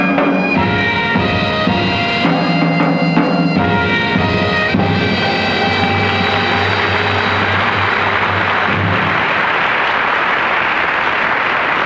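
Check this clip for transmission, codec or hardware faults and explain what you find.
No transmission, codec or hardware faults.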